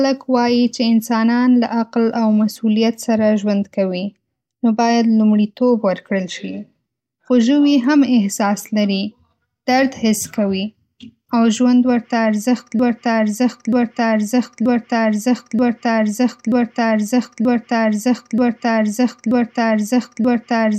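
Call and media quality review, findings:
Broken-record loop, 12.79 s to end of clip. Same 0.93 s speech fragment repeats exactly, back to back, nine times. Likely a stalled player or stream replaying its last held buffer. Speech for that span lost.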